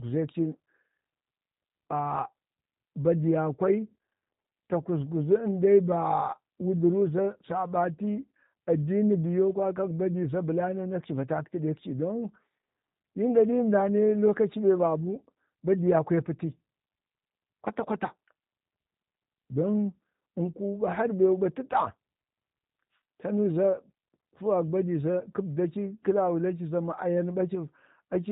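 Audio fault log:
Throughout, G.729 codec: speech is rebuilt from a vocal tract model at 8 kbit/s, so it sounds rough and synthetic, with nothing above 3.8 kHz.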